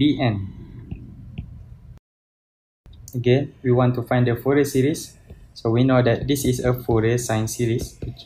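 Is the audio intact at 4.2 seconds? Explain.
Yes, at 4.2 seconds the audio is intact, with no dropout, click, distortion or other fault at that moment.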